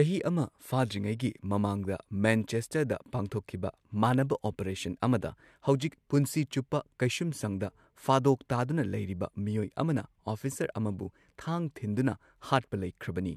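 No technical faults are audible.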